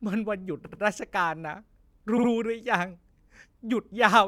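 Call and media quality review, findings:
Repeated frames, 0.65 to 0.81 s: stutter, an 80 ms block played twice more, adding 160 ms; fits four 20 ms codec frames. Same at 2.17 to 2.29 s, 60 ms block, adding 120 ms. Decoder/transport duplication. Spectrogram shows identical repeated slices.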